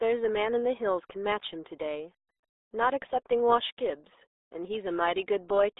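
Throughout, the speech carries RealAudio 14.4 codec damage, consistent with an 8 kbit/s dial-up stream: muffled, gargly smearing inside a 300 Hz to 3.7 kHz band, unlike clean telephone band-limiting.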